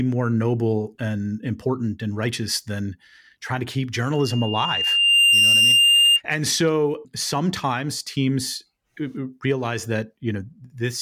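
At 4.12 s, just after "than trying to keep", a loudspeaker feedback squeal begins. The microphone is picking up its own loudspeaker, and at 2.8 kHz the loop gain tops unity, so that single pitch feeds on itself. It swells over roughly a second to around 10 dB above the speech, then cuts off at 6.21 s. That gradual self-reinforcing build is what separates it from a steady interference whistle, which would start at full level.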